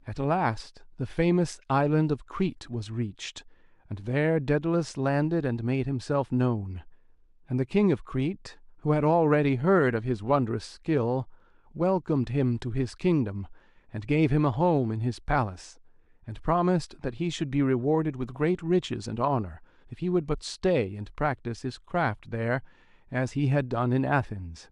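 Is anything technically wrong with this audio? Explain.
No, nothing technically wrong can be heard in this speech recording, and the signal stays steady and intact throughout.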